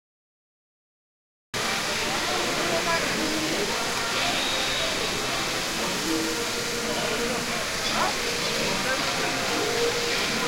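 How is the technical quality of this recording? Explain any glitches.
The recording has one clear glitch at the start. It is a cut-off start: the first 1.54 s are digital silence. The sound then begins abruptly mid-event at 1.54 s, with no natural attack, because capture began late.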